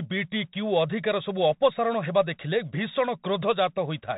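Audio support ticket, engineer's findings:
Bluetooth CVSD headset codec, throughout. Speech band-limited, nothing above 4 kHz; plainly audible damage, consistent with a 64 kbps CVSD link. Mechanism: 1-bit delta modulation, each sample only steps up or down with adaptive step size. Loud high-frequency content outruns the step (slope overload) and distorts; sibilants scratchy; granular hiss under speech from step hunting. Probable component: headset Bluetooth link in narrowband mode.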